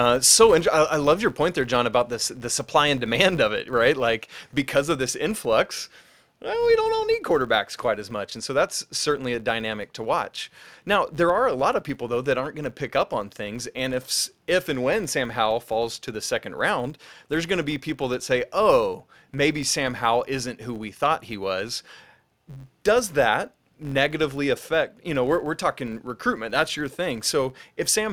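From start to finish the speech carries a low buzz at about 93.8 Hz, the classic sign of a filter restarted on every block. Each block begins from silence, leaving a tiny transient, and the rate fits a 512-sample block, so the buzz rises and falls with the speech level.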